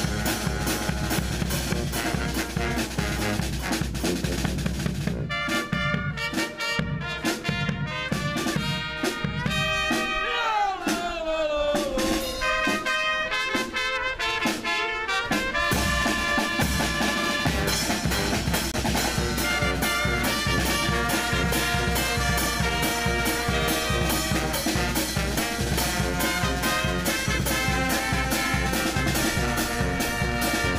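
A likely Bluetooth dropout, where a packet failed to reach the headphones in time and was discarded, leaves the audio with a brief silent hole from 18.72 to 18.74 s. About 23 ms of sound is missing, which fits a single lost packet. Playback then resumes further along, as though it had kept running through the gap.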